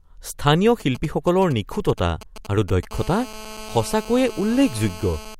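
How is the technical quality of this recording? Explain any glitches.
The recording is marred by interference from a nearby 2G mobile phone, present for most of the clip.

From 0.80 to 2.85 s there are GSM signalling bursts. The phone sends only brief groups of radio bursts while it negotiates with the network, and the audio circuitry rectifies those pulses into the signal path. Under the speech this comes through as a galloping dit-dit-dit of short 217 Hz buzzes, sitting roughly 20 dB below the speech.

From 2.91 to 5.35 s the interference becomes a continuous GSM phone buzz. Once the phone is in a call it transmits its bursts steadily at 217 per second, and rectification turns that pulse train into audio. The result is a hard, raspy 217 Hz buzz rich in harmonics, at about 17 dB below the speech, running independently of what is being said.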